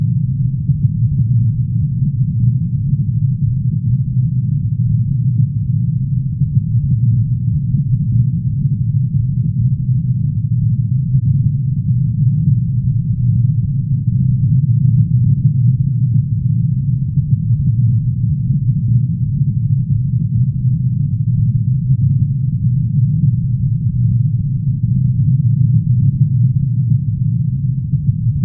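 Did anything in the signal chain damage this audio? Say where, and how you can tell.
No, nothing in the signal chain has damaged this audio. No stage between capture and playback leaves an audible mark on the sound.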